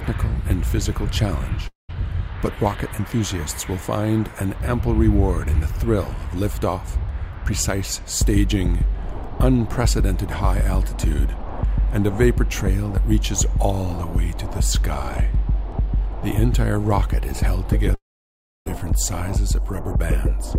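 At 1.67 s the sound breaks off for about 0.22 s, until 1.91 s. The gap is bridged by a brief fading buzz, then about 0.15 s of near-silence, before the audio resumes with that stretch missing. A longer break follows from 17.95 s to 18.80 s: roughly 0.72 s is lost and about 0.66 s of it is silent after the brief fade. The pattern is likely a long network dropout, with the receiver concealing the loss before falling quiet.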